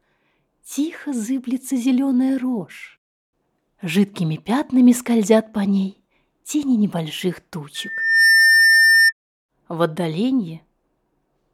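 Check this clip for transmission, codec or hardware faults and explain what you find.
One fault is present. From 7.75 to 9.13 s there is loudspeaker feedback squeal: a microphone picks up its own loudspeaker and the loop gain exceeds one at 1.8 kHz. The tone swells over roughly half a second to about 5 dB above the audio. On a spectrogram it appears as a bright horizontal line, and on the waveform as a steadily widening envelope.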